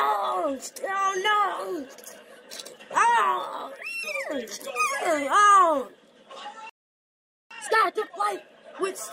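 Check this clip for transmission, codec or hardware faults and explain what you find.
Two related faults appear near the end of the clip: a playback stall followed by a time-compressed catch-up.

From 6.70 s to 7.51 s the output goes silent for about 0.81 s, cutting the sound off mid-flow. This is a playback stall. The likely cause is the player exhausting its buffered data or having its audio thread blocked, so nothing reached the output until it recovered. When the sound resumes it carries on from where it was interrupted.

From 7.51 s to 8.31 s the player runs a time-compressed catch-up to recover the backlog from the stall. It drops short segments and cross-fades across the joins, playing the material at 2.0 times normal speed without shifting its pitch. Over this 0.8 s stretch the audio sounds hurried and crowded at its usual pitch.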